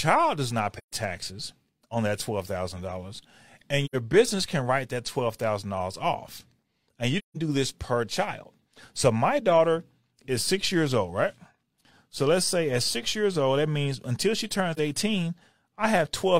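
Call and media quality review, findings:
AAC frame loss with muting in the speech. Soft-edged dropouts at 0.78–0.92 s, 3.85–3.95 s before "business can write that", 7.18–7.37 s before "do this per child", and 14.74–14.79 s after "that means until she". Gaps of 128, 85, 171 and 43 ms, which fits whole lost frames of about 43 ms each. Decoder zeroes the missing spectrum. Overlapping windows fade out and back in.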